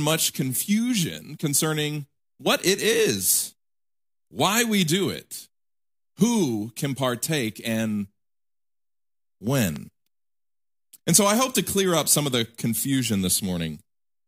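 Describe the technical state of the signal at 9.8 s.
At 9.76 to 9.78 s the signal carries a single loud pop, a sharp click lasting about 20 ms that stands roughly 5 dB above the surrounding speech, which continues beneath it. The likely cause is a brief voltage step or pulse, from a plug, switch, static discharge or driver glitch, entering the chain and being shaped by the circuits after it. On a waveform it appears as one abrupt spike; on a spectrogram, as a thin vertical stripe spanning all frequencies.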